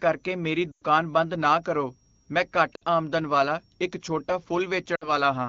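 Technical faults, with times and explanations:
0.72–0.84 s, 2.75–2.83 s and 4.95–5.09 s, lost AMR speech frames: frames failed their checksum, so the decoder reused the last good pitch and vocal-tract settings at falling gain. The first gap, about 100 ms (five 20 ms frames), smears and fades. The 60 ms gaps are shorter dropouts, each falling to near silence, against the clear wideband speech.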